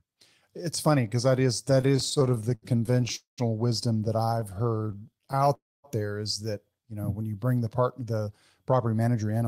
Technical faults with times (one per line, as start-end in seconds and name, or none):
1.81-3.11 repeated stalls (stutter)
3.15-3.40 call audio freeze
4.18-5.49 repeated stalls (stutter)
5.54-5.86 call audio freeze
7.98-9.44 jitter buffer speed-up